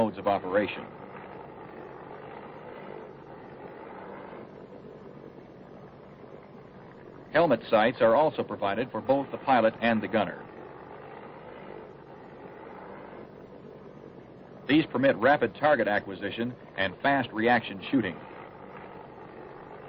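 A steady 20 Hz ticking runs under the sound throughout. The resampler restarted on every 50 ms block when converting 48 kHz to 44.1 kHz, leaving an error at each block edge.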